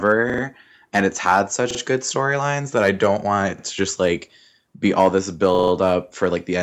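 Speech, with a repeated buffer stutter at 0.30, 1.71 (after "and it's had"), 3.58 (after "i don't want it") and 5.55 s (after "like be all this"). A roughly 43 ms chunk, which fits a 2048-sample buffer, replays one to four times, apparently without dropping any audio.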